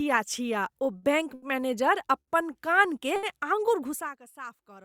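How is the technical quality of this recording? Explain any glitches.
The speech is marred by four brief holds. Short stalls from a late packet occur at 0.97 s (after "छिया ओ", before "बैङ्क मैनेजर"), 1.34 s (after "छिया ओ बैङ्क"), 2.20 s (after "छिया ओ बैङ्क मैनेजर") and 3.16 s. Each time, the jitter buffer emptied while a packet was late, so the receiver stretched the last sound for 50, 80, 70 and 70 ms respectively, then resumed without dropping anything. This is heard as a briefly frozen syllable with a faint buzz or dip.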